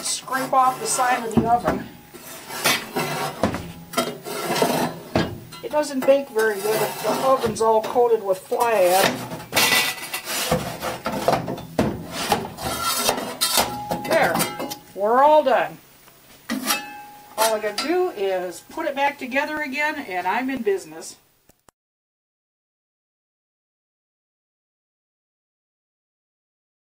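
A short audio clip with periodic USB or driver dropouts from 19.07 to 21.07 s. Roughly a millisecond goes missing every 0.5 s, heard as regular ticks, about five.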